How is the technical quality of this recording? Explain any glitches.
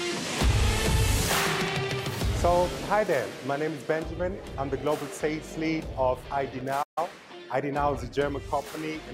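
One glitch stands out: a playback stall from 6.82 to 6.98 s. The sound cuts to silence for about 138 ms, then carries on, most likely because the player ran short of data or its thread got blocked.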